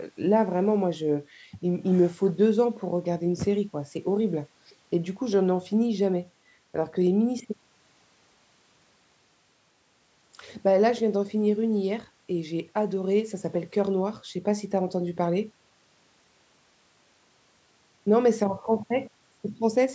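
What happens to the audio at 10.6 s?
Nothing goes wrong at 10.6 s: the speech carries on intact, with only the usual narrowed band of call microphone processing, nothing above 8 kHz and the lowest bass trimmed.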